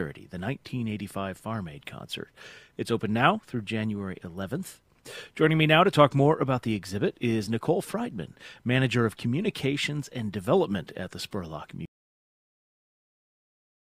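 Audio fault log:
11.85–13.94 s, audio dropout to silence: the sound stops abruptly mid-flow at 11.85 s and the last 2.1 s of the clip are silent, with no room tone, hiss or decay tail, and the sound never returns. That points to the input likely being lost while recording continued, not to a fade-out or a noise gate. A fade would taper and a gate would close only once the signal fell quiet, whereas this is an instant drop to silence.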